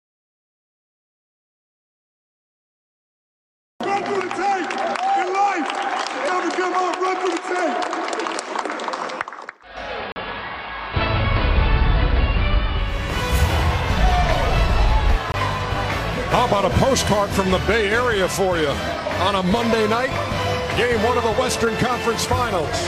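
At 9.57 s the receiver loses its digital signal and cross-fades over about 460 ms to the station's AM analogue broadcast. This is a digital radio blending to analogue. The level drops by about 2 dB, and a faint hiss comes up, roughly 35 dB below the programme. The receiver blends back to digital at 13.2 s, and the clean background returns.

Inside that analogue stretch, from 10.12 to 10.16 s, there is a block of digital silence. The output buffer was likely not filled in time, so 40 ms of samples became zeros. The sound cuts out and back with no fade, leaving a short hole. A second block, from 15.32 to 15.34 s, blanks 20 ms and comes across as a brief hole.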